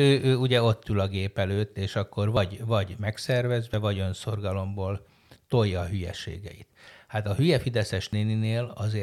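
At 2.37, 3.74 and 8.13 s the speech jumps, no gap, about 50 ms lost at the first and about 20 ms at the others, likely a dropped buffer from an overrun.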